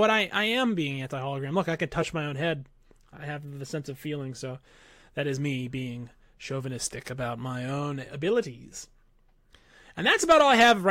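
No dropouts, clipping, glitches or other technical faults can be heard anywhere in the recording.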